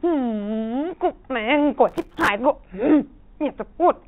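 From 1.89 to 2.28 s, processor overload crackle tears through the speech. Missed buffers, which fits roughly 3 ms blocks, replay old audio with hard edges.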